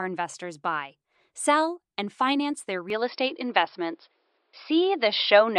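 An input switch to a poorer device at 2.90 s, right after "sell and finance their", runs to the end of the speech. The recording likely moved mid-take to a narrower-band microphone or headset path: nothing remains above 5.4 kHz, so the voice turns duller, the level shifts by roughly 5 dB, and a faint new noise floor appears, with no gap at the changeover.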